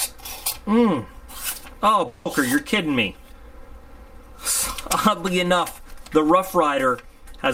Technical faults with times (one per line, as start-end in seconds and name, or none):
2.07-2.27 long network dropout